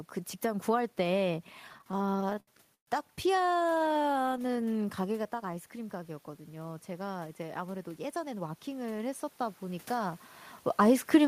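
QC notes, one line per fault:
1.68–2.88 s, repeated stalls (stutter): packets arrived late, so the buffer ran dry 17 times; the last sound is stretched to fill the gaps, the longest 128 ms, so the audio drags without losing anything.
3.36–4.63 s, repeated stalls (stutter): 26 shorter underruns, none over 15 ms, each bridged by extending the preceding sound, which gives a choppy, stuttering texture with no content missing.
5.03–10.28 s, automatic gain rising: the input dropped about 11 dB as the talker moved back near 5 s, and the gain control slowly added about 8 dB, so voice and room noise swell together.
7.42–8.56 s, jitter buffer speed-up: with excess audio buffered, the receiver cut short pitch-period pieces, about a tenth of a second in total, so the audio runs at 109% speed and sounds hurried at unchanged pitch.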